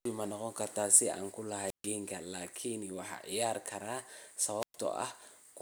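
At 1.64 to 1.91 s and 4.60 to 4.76 s, wireless microphone squelch dropouts occur. The radio signal fades until the receiver's squelch mutes it for about 140 ms and 110 ms. Rising hiss before each mute sets them apart from plain digital gaps.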